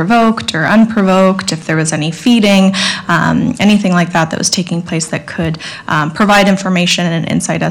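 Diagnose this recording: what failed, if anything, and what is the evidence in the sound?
Hard clipping throughout, from signal driven about 15 dB past the converter's ceiling: a few percent of samples flatten, showing squared-off waveform peaks and harmonic smear high up the spectrogram.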